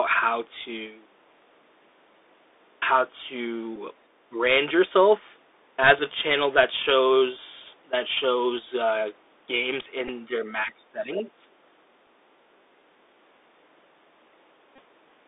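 The speech runs through a Bluetooth CVSD headset codec from start to finish, and the damage is plainly audible. Nothing above about 3.7 kHz or below about 300 Hz survives, s sounds turn scratchy, and a granular hiss sits under the speech, which fits one-bit delta coding at 64 kbit/s. A spectrogram shows a hard ceiling near 3.7 kHz, with a fine noise floor between syllables.

At 3.76 s a Bluetooth headset packet is repeated. For about 7.5 ms the decoder replays the previous packet's bits. On the waveform it appears as a short copied stretch, with a slight vertical seam in the spectrogram.

From 4.30 to 4.37 s the speech dips by about 10 dB. This is likely speech suppressed in double talk, where an echo canceller ducked the talker while the far side spoke. The waveform shows a brief notch in the envelope.

Further packet repeats follow at 5.99 s (about 3.8 ms, a faint tick) and from 10.08 to 10.10 s (about 11.2 ms). 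Each shows as a thin vertical seam.

The double-talk suppression returns from 10.22 to 10.46 s, mildly at about 5 dB. From 10.63 to 11.47 s it is much deeper, at around 20 dB. The waveform envelope drops sharply there.

Inside that stretch, from 11.16 to 11.22 s, a second voice comes through, about 10 dB below the talker. This is likely the other side's voice leaking through from a loudspeaker that the echo canceller failed to remove. It shows as a faint, separate harmonic trace.

A short repeat follows at 12.06 s. From 14.76 to 14.79 s a run of repeats lasting about 26 ms, which points to roughly seven lost packets, produces a brief buzz near 267 Hz. In the spectrogram it appears as evenly spaced horizontal striping, and in the waveform as a cycle repeating every 3.75 ms.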